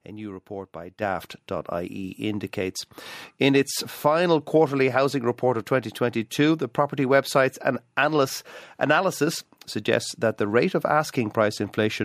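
Right at 1.02 s, just after "new report by", the microphone volume gets stepped up. The call software apparently judged the mic too quiet and bumped the device's input gain in a single jump of about 8 dB. Because it's a change at the input, the speech and the background noise both lurch louder at the same instant, mid-sentence, and they stay at that higher level rather than easing back down.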